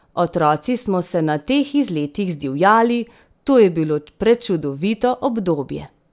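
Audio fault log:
No faults detected in this speech recording.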